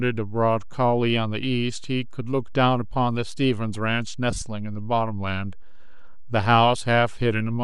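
DC offset runs through the whole speech clip: the waveform sits shifted off zero by a constant amount. You can't hear it as such. It shows as a steady component at the very bottom of the spectrum, and it eats into headroom because one polarity reaches full scale sooner than the other. The light lossy compression sits alongside it.

Lost LE Audio frames occur from 4.31 to 4.42 s. Over about 105 ms, roughly 67.5 ms of audio goes missing in several separate gaps. The longest run is around 30 ms, which points to a handful of consecutive LC3 frames being dropped at once. In each gap the decoder repeats the last good spectrum with randomised signs, so the voiced sound turns briefly into a rough, noisy smear before clean audio returns.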